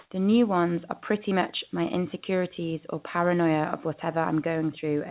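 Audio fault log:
0.0–0.1 s, comfort noise in place of the background: the first 100 ms carry a smooth, featureless hiss instead of the real room background, which sits about 63 dB below the loudest sound, and there is a level jump of about 39 dB where the genuine background takes over. This is likely discontinuous transmission, where the receiver generates synthetic noise during a pause it was not sent, capped like the rest of the call audio at 4 kHz.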